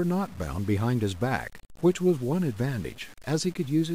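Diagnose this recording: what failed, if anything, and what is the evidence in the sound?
Low bit depth without dither, start to finish: grainy distortion that tracks the speech, about 25 dB down. That's likely a sample-format conversion truncating to roughly 7 bits.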